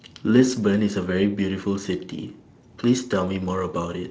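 Speech, with no technical faults to be heard.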